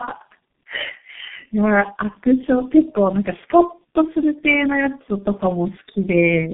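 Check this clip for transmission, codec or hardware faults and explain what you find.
There's one fault, and it runs through the whole clip: tandem speech coding. The speech sounds like it went through four separate speech codecs in a row, ending with something like G.723.1, each one re-encoding the previous one's already damaged output. Nothing gets above 3.7 kHz, and the speech comes out rough, muffled and warbly, worse than any one of those codecs would leave it.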